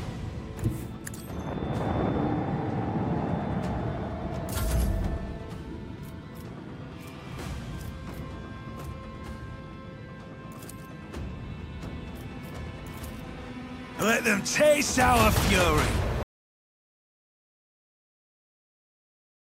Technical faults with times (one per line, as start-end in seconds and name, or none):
16.23-19.48 audio dropout to silence